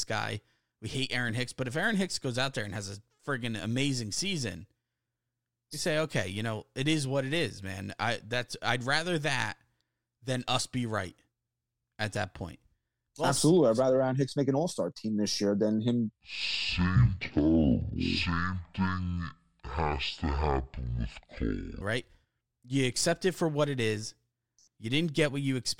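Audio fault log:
16.1–21.81 s, section at the wrong speed: just after "this year than him", the speech abruptly drops to half speed, turning deep and drawn out, roughly ten semitones lower, then snaps back at 21.81 s. Pitch and tempo fall together, which is what separates this from a pitch-shift fault, where timing would stay intact. The slowed syllables and stretched pauses point to the section likely being played back against a clock running at half the correct rate.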